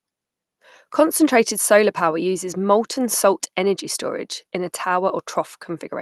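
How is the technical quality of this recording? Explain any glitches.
The technical quality of this recording holds up, with no glitches to explain in the speech as it comes through the call connection.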